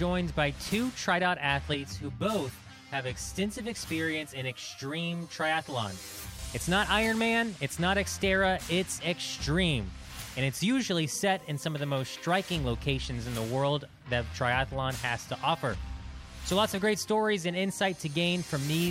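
From 1.74 to 6.39 s the sound turns hollow from channel delay (comb filtering): one channel lags around 10 ms, so the spectrogram shows evenly spaced notches from about 50 Hz upward.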